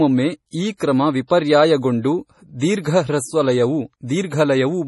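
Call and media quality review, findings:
MP3 compression, whole clip: speech sounds watery and swirly throughout, with nothing above 11.5 kHz. Likely an MP3 encoder starved for bits, which fits something around 32 kbps. It chops the treble at a fixed point and drops weak frequency lines, so they flicker on and off between frames. Heavy damage, so sibilants get that metallic chirp.

Pre-echo, 0.77 to 0.80 s: short hiss creeping in about 35 ms ahead of a sharp attack, which lands soft and smeared. The codec spreads its quantisation noise across the whole block. With the attack late in the block, noise sized for the loud part fills the quiet gap before it.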